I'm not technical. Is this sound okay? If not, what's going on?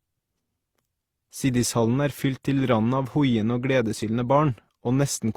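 No, not quite. The whole clip has the stacked-up blemishes of transcoding between lossy codecs: the speech was likely squeezed by one compressor and then squeezed again by another, so each one's blemishes pile on top of the other's and the dull top end stays.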